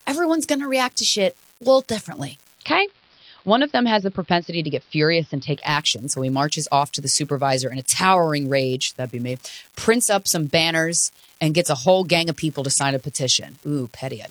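From start to finish, one data line in the digital path is marginal, so a single bit comes out wrong in a random share of samples. This is an unreliable data bit, and every error adds a spike of the same size. The spikes pile up into a steady fine crackle or fizz under the speech, and because they don't depend on the signal, the fizz carries on unchanged through the pauses.

At 2.49 s the receiver loses the digital stream and the hybrid radio blends to the analogue broadcast, here AM, crossfading over about 206 ms. This is digital radio blending to analogue. The AM path carries less treble, so the speech turns dull and muffled, and a faint hiss rises, roughly 40 dB below the signal. The level stays the same. At 5.73 s it crossfades back to digital and full bandwidth returns.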